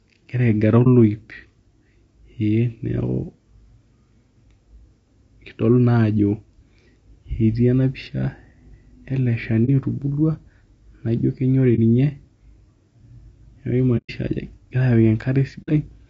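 The speech sounds rough and grainy throughout, with a thin top band, likely low-delay AAC compression at a low bitrate, near 32 kbps. AAC frame loss with muting leaves brief dips at 0.83, 9.65 and 11.75 seconds, and soft-edged holes at 13.97 to 14.10 and 15.62 to 15.70 seconds.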